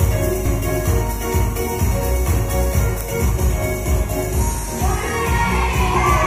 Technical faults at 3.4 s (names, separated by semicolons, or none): damaged data in a compressed stream